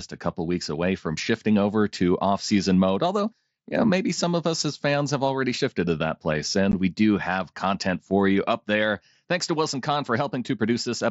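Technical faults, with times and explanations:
6.72 s, unconcealed Bluetooth headset packet loss: after "shifted to that place", a 15 ms hard-edged, unfilled silence, fitting two lost packets, shows as a flat waveform gap and a thin blank spectrogram stripe.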